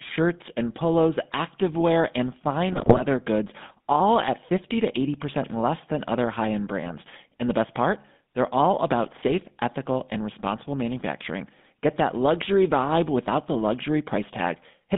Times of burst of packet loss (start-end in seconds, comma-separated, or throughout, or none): none